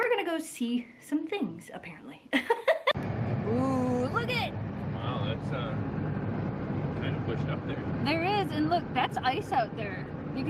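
No audible faults anywhere in the audio.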